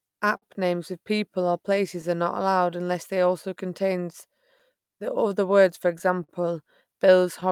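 Throughout the clip the pacing wavers with small recurring hiccups, a sign of clock drift between sender and receiver: the sender's clock runs roughly 4 percent slow, so the buffer keeps draining.

From 0.12 to 5.52 s the tempo drags slightly, to 98 percent speed. These are repeated timing corrections, with the receiver repeating short pieces that add roughly a tenth of a second.

At 0.37 to 0.44 s one sound is held too long with a slight buzz or dip. This short stall from a late packet stretched the last sound for 51 ms until the data arrived.

Between 1.77 and 6.30 s brief ticks and smears appear at about fifteen places. These scattered short gaps were each patched by continuing the previous sound, the longest lasting around 50 ms.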